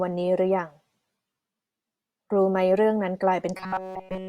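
Speech, with robotic sound from repeated short buffers from 3.57 s to the end at 4.29 s. The voice becomes a rigid, metallic buzz near 188 Hz. That pitch fits one tiny slice of about 5.3 ms being replayed over and over, likely because new audio stopped arriving in time.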